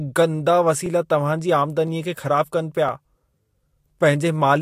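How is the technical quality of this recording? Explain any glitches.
The speech has two audible glitches from overlapping chunks, at 0.86 s just before "तव्हां जी" and again at 2.89 s. Each time, about 12 ms of audio plays twice. The sound was handled in 1.0 s chunks, and a new chunk began before the previous one had finished, so its opening overlapped the previous chunk's ending. That doubled sliver comes across as a click or stutter. Unlike a dropout or gap, nothing is missing here; the audio repeats.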